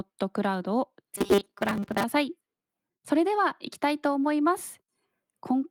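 At 0.63 to 0.65 s there is a lost packet rebuilt from error correction. A 20 ms stretch, consistent with a single missing packet, was replaced by the low-bitrate redundant copy carried in the following packet. Playback continues without a gap. The rebuilt frame is briefly rougher and grainier than the surrounding speech, a short patch of coarser texture rather than a dropout.

From 1.16 to 2.04 s the speech turns into robotic sound from repeated short buffers. Fresh audio is likely arriving too slowly, so playback keeps looping a very short recent buffer while most of the real signal, roughly two-thirds or more, is skipped. The loop imposes a steady 200 Hz buzz, which points to a repeat length of about 5 ms. The result is a flat, metallic drone that only loosely follows the speech contour.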